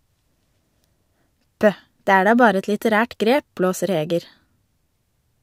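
No technical faults detected.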